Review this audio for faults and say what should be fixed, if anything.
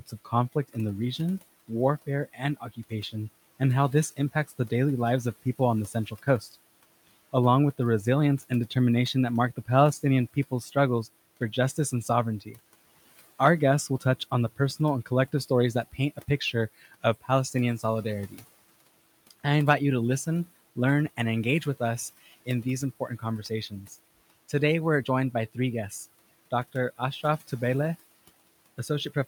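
Speech cut by the noise suppressor at 0–10.76 s, 11.77–19.32 s (before "I invite you to") and 22.46–27.51 s (after "and engage with us"): soft endings are mistaken for noise and dip by up to about 17 dB. To prevent it, reduce the suppressor's aggressiveness or give it a more sensitive speech detector.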